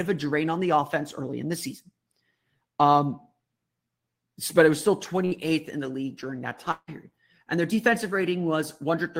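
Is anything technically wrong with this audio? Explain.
Yes, there are two network faults.

At 5.25 to 5.33 s, just after "but it was still", a burst of packet loss hits. A short run of audio never arrives, so the receiver stretches the last sound and fades it for about 60 ms. Audio resumes at "in the league during" with about 60 ms skipped.

At 6.71 to 6.90 s, after "the league during that", the likely cause is a long network dropout. The receiver extends the final sound and lets it decay over about 160 ms, ending in about 40 ms of silence. About 160 ms of the speech never returns.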